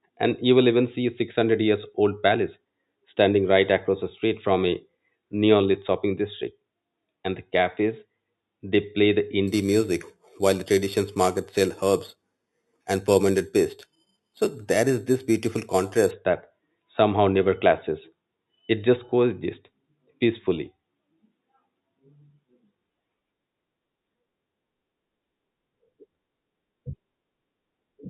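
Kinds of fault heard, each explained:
Imaging from sample-and-hold upsampling: a metallic fizz at 4 to 8 kHz, about 17 dB down, points to 8 kHz audio held up to 48 kHz. Unlike hiss, it follows the speech.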